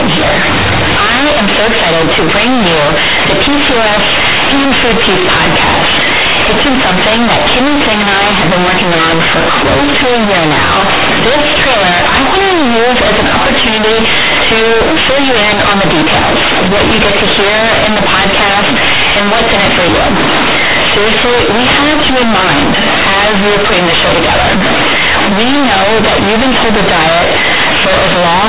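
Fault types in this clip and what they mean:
Companded audio read as linear: The speech was coded as A-law telephone bytes but played back as plain linear 8-bit samples, with no expansion step. The logarithmic codes are taken as straight amplitudes. Each change of sign throws the output across about half its range. Quiet passages come out as loud as loud ones, and the waveform is bent out of shape. The result is very loud, buzzy distortion throughout, with strong noise filling the pauses.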